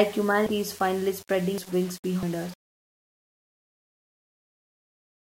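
From the start to the end of the speech, the signal has a grainy, rough texture that follows its level, and quieter stretches break into sputtering grit and near-silence. This is most likely low bit depth without dither. Rounding to very few levels, which fits about 6 bits, leaves an error only about 25 dB below the signal. On a waveform the quiet parts look like coarse stair-steps, and a spectrogram shows broadband hash rising and falling with the speech.

At 0.46 s, 1.58 s and 2.23 s there is an abrupt jump forward in the speech and no gap of silence. The middle skip loses roughly a fifth of a second, and the other two lose about a tenth each. A dropped buffer (overrun) is the likely cause: the samples were overwritten before being read, and the audio on either side was butted together. Each join shows as a sudden discontinuity in the waveform and a thin vertical broadband line on the spectrogram, with the harmonic pattern changing abruptly at that point.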